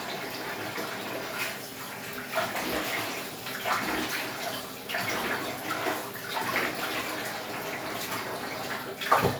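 No technical faults are audible anywhere in this recording of sounds.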